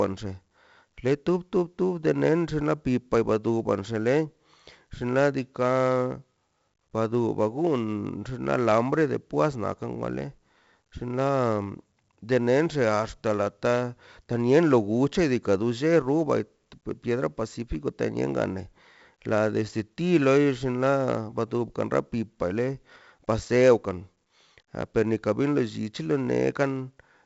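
Throughout the speech, 4-bit ADPCM compression leaves gritty hiss riding every loud passage, with nothing above 7.7 kHz, consistent with roughly 64 kbps at a 16 kHz rate.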